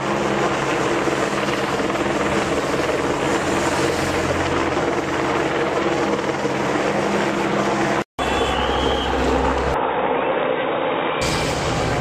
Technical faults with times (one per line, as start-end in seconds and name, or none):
9.74-11.22 input switched to a poorer device
10.32 damaged data in a compressed stream